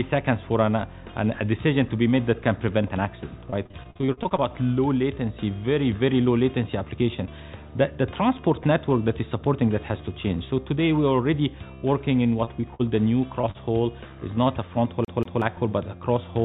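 Between 3.5 and 4.5 s, packets go missing again and again. This is repeated packet loss, and the receiver patches each hole by extending the sound just before it. The gaps come in quick succession, about a dozen in all, none longer than about 45 ms, and together they cover roughly a third of that second. The result is choppy, robotic sound with fragments missing. A shorter bout of the same repeated packet loss returns from 12.23 to 12.81 s, with four gaps of up to 46 ms that hollow out about a sixth of the stretch.

Two separate short concealed packet losses follow, at 13.41 to 13.45 s and at 13.51 to 13.56 s, missing about 20 ms and 40 ms of audio. Each time the decoder bridges the hole by continuing the preceding sound and then blends back into the real signal. Each is heard as a brief smear or wobble. Throughout, the call path keeps everything below 4 kHz, which fits G.711 A-law at 64 kbps.

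From 15.05 to 15.42 s the playback behaves like a CD stuck on one turn. The pickup jumps back to the same point after each pass, so a slice of about 185 ms plays twice more with a short mute at each jump. The result is the quick, evenly spaced stutter of a skipping disc.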